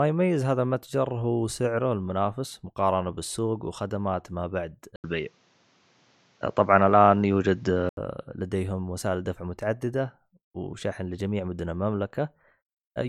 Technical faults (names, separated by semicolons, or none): input switched to a poorer device